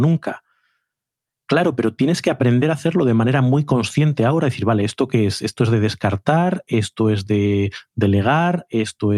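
No technical faults can be heard anywhere in the recording.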